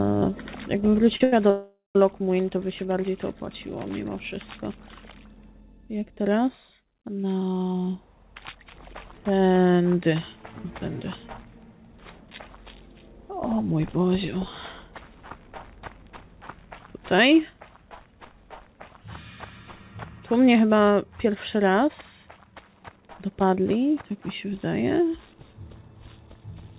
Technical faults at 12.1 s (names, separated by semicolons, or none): none